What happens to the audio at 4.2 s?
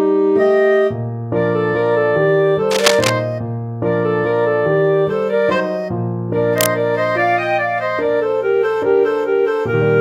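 Nothing goes wrong at 4.2 s; the audio runs on intact through that moment.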